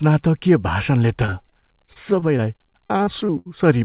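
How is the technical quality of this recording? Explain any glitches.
The recording has one clear problem: a stretch of choppy, robotic speech. The band-limited call sound, with nothing above 4 kHz, fits a G.711 narrowband path.

From 1.26 to 3.47 s there is repeated packet loss (robotic sound). Nineteen short holes, the longest 70 ms, are each patched by stretching the preceding sound, so about 18% of that span is synthetic fill. Unlike a single dropout or steady codec distortion, the gaps keep recurring in quick succession, giving a robotic, stuttering texture with fragments missing.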